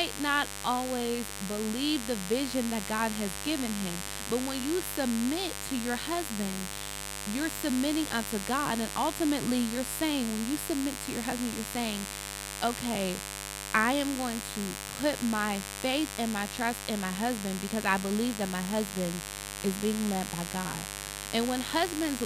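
A raspy mains buzz runs under the speech from start to end. Switching spikes on 50 Hz mains add harmonics reaching several kHz. It sits fairly loud, about 10 dB below the speech.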